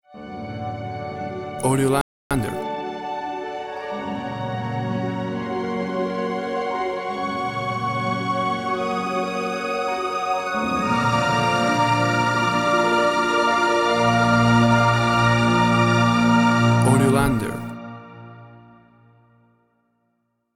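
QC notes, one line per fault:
2.01–2.31 s, playback stall: the sound just drops out mid-flow for about 0.29 s, then picks back up. That's most likely the player running dry on data or its thread getting blocked, so the output sat silent until it recovered.
2.31–2.89 s, time-compressed catch-up: right after the gap everything runs hurried, around 1.5 times normal speed, but pitch stays put. The player's trimming its backlog by cutting out small slices and cross-fading the joins.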